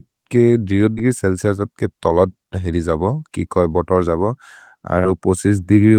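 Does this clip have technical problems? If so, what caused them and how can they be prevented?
Yes. A burst of packet loss occurs twice, from 0.91 to 1.00 s and from 4.99 to 5.07 s. Each time, several consecutive packets never arrived in time, so the receiver stretched the last good sound for about 55 ms, fading it into a held buzz or hiss, then skipped ahead, leaving roughly 60 ms of speech missing. Prevention: use a larger jitter buffer with forward error correction or redundant packets over a more stable network connection.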